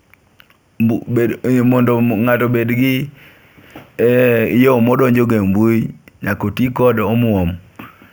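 Each sample was repeated with no smoothing filter, which fits a 16 kHz source raised to 48 kHz. This imaging from sample-and-hold upsampling mirrors the spectrum into 8 to 16 kHz, about 25 dB down, a metallic fizz tracking the speech throughout.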